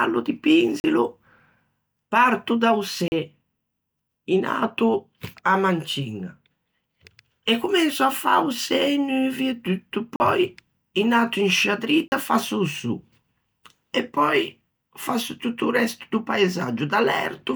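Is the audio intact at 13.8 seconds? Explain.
Yes, the audio is intact at 13.8 seconds, with no fault audible at that point in the speech.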